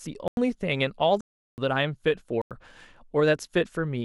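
The speech drops out abruptly three times: a short hole from 0.28 to 0.37 s (93 ms), a longer one from 1.21 to 1.58 s (372 ms), and another from 2.42 to 2.51 s (93 ms). These are blocks of digital silence. Output buffers likely went unfilled and were zeroed, with no fade, which fits 4096-sample blocks, the middle gap four of them.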